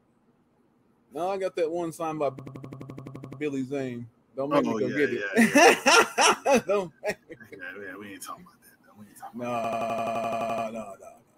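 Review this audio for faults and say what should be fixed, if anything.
A system hang loop occurs at 2.39–3.41 s and again at 9.64–10.67 s. The host froze while the hardware replayed one 85.33 ms chunk twelve times, which fits a 4096-sample buffer and sounds like a machine-gun stutter at 11.7 Hz. The waveform shows identical repeated blocks, and the spectrogram shows evenly spaced vertical stripes. To prevent it, the driver should detect a stalled buffer and output silence instead of cycling stale data.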